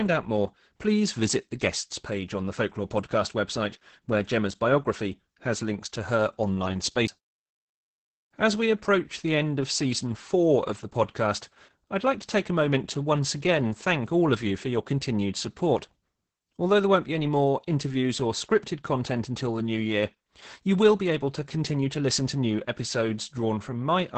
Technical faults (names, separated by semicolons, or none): Opus voice compression; CD skip